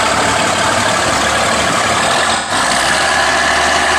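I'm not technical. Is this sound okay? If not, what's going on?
No. From 2.36 to 2.52 s there is AAC frame loss with concealment. A short stretch of data went missing, roughly three frames' worth. The player guessed the gap from the sound just before it, leaving a brief smeared, noisy or phasey patch.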